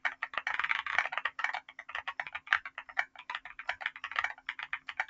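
A speech-oriented noise suppressor has been left running on non-speech audio, and it treats the steady parts of the sound as noise. Throughout the clip the level swings by roughly 15 dB as held material and tails are pulled down while onsets slip through, which gives a pumping, fluttering, thinned-out texture. A compressor's gain riding follows overall loudness. This gating follows how steady the sound is, so transients mostly keep their level while sustained energy sinks under them. The same processor produces two deeper episodes of sound cut by the noise suppressor, from 1.62 to 1.88 s and from 2.69 to 3.26 s. In each, the sound drops by about 14 dB for around a third to half a second and decays are clipped short. A codec dropout would leave abrupt silence or a smeared patch. Here the sound fades down and back, and mainly the sustained content is lost. The band-limit, with nothing above 8 kHz, fits the G.722 call path and is not part of this fault.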